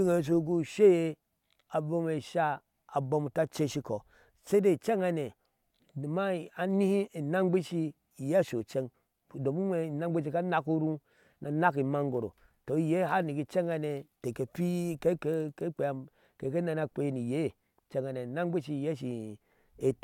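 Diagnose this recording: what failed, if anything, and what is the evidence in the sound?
Nothing failed; no faults heard.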